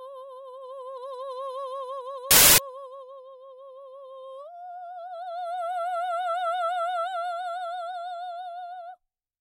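From 2.31 to 2.58 s, the music becomes loud, harsh broadband noise. These are samples built from the wrong bytes. Misordered bytes turned the low bits into the largest part of each value.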